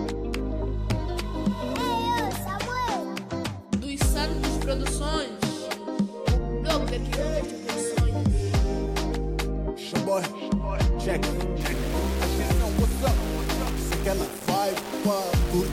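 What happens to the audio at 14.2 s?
At 14.2 s the audio is inside a stretch of grainy distortion running from 11.6 s to the end. It is likely low bit depth without dither, consistent with rounding to about 4 bits. The error tracks the signal, sitting only about 15 dB below it. The waveform looks stair-stepped, and the spectrogram shows a broadband haze that rises and falls with the sound.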